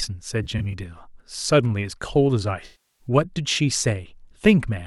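Around 0.43 to 0.74 s there's AAC frame loss with concealment: a few short dropouts, each only about 20 ms or so, about 85 ms in all, scattered across roughly 300 ms. The decoder patches each gap from the last good spectrum, so that stretch sounds briefly smeared and a bit noisy. From 2.65 to 3.07 s the loss is much heavier, about 340 ms in all. The fill-in can't hold that long, so the sound decays toward silence and then fades back in.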